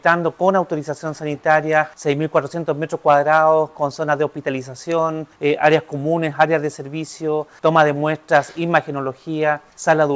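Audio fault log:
4.92 s, electrical switching spike: a single sharp snap, about a millisecond long, sits on top of the sound, which like the rest of the clip carries nothing above 8 kHz from the call path. It is likely a nearby switch or static discharge arcing into the line.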